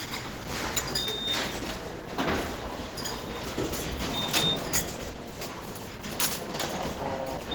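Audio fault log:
Throughout, Opus compression: the whole clip has a grainy, roughened texture, with tonal parts going noisy and a hoarse, muffled edge down low, and the damage is plainly audible. Content still reaches about 20.2 kHz, so the band isn't squeezed. That mix fits Opus in hybrid mode at a low rate around 16 kbps, the likely cause. Starved bands get filled with noise instead of left empty, so it roughens rather than swirls.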